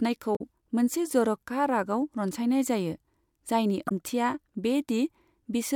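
At 0.35 to 0.41 s, just before "मोनसे जर'खा", and again at 3.87 to 3.92 s, ahead of "ओंथिआ बे", the speech breaks into a short glitch. That's damaged data in a compressed stream: the decoder hits corrupted frames, loses sync and garbles them while hunting for the next header.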